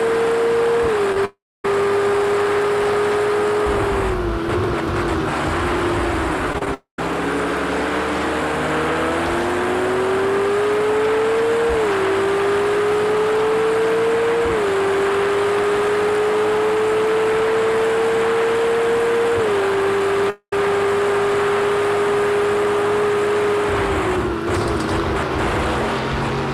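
The audio has two network faults. Repeated packet loss (robotic sound) appears at 1.12–1.18 s and 6.53–6.67 s. In each burst, three short holes are patched by repeating the preceding sound, giving a brief choppy stutter with small pieces missing. Three longer breaks follow at 1.25–1.65 s, 6.74–6.99 s and 20.30–20.53 s. Each begins with a decaying buzz from the continued last sound, then goes silent for about 0.25 s, 0.11 s and 0.08 s respectively. When the audio resumes, the lost part is skipped, the likely cause being a long network dropout.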